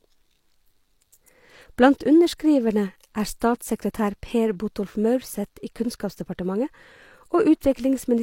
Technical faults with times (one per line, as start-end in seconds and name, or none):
3.40 pre-echo